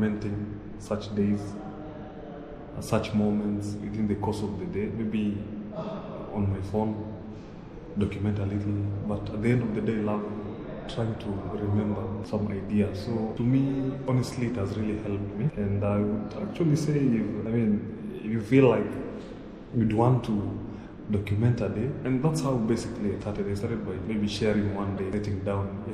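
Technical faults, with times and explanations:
Throughout: MP3 compression. The sound is watery and swirly, and sharp attacks smear rather than snapping cleanly. The damage is plainly audible, which fits a low bitrate around 64 kbps. The likely cause is MP3 encoding with too few bits. The encoder dropped quieter frequency lines, which then flicker in and out between frames and produce the swirling texture.
24.97 to 24.99 s: Corrupt frame decoded. A short glitch cuts into the sound, peaking at around -25 dBFS and lasting roughly the length of one compressed frame. Flipped bits inside that frame were played through rather than concealed. The decoder misread gains or codes and sprayed energy into the wrong frequencies, so a brief synthetic sound appears that has nothing to do with the surrounding audio.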